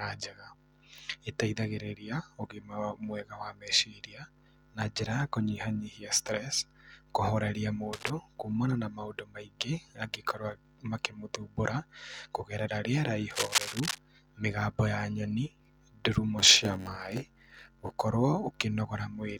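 From 7.93 to 8.10 s, just before "kumana na maũndũ maingĩ", and again from 13.30 to 13.98 s, between "makĩmũthumbũra kũgerera rĩera" and "mĩgambo ya nyoni ndurumo", cable scratch noise appears: dense, irregular rustling bursts, likely from a worn connector shifting its contact resistance. The first burst sits roughly 10 dB under the speech, and the second is about as loud as it. Unlike a steady hum or regular clicks, these bursts have no repeating pattern.

From 16.38 to 17.99 s, a block size mismatch (padded) inserts a short silent gap into every block. This produces a 91.9 Hz buzz and slows the speech to 0.919 times its speed while its pitch stays about normal. A resampling error would lower the pitch as well.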